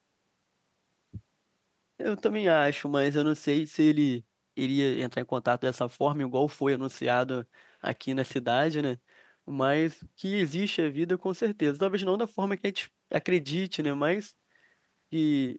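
No technical faults can be heard anywhere in this speech recording. It carries nothing above 8 kHz, which fits a call path running a wideband Opus setting.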